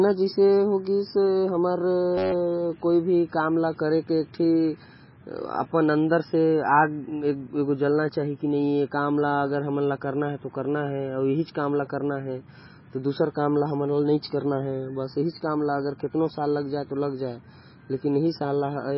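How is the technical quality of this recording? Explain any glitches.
The recording has two technical problems: heavy, constant compression damage and one brief buzz.

Throughout the speech, nothing survives above 5.6 kHz, and the sound is watery and swirly. That is likely MP3 compression at a very low bitrate, around 16 kbps. The fixed treble ceiling separates it from ordinary dullness.

From 2.18 to 2.33 s there is a system hang loop: the driver stalled while the hardware replayed one 10.67 ms stretch of audio, which fits a 512-sample buffer. It comes out as a steady 93.8 Hz buzz rather than a dropout, and little or no audio is lost.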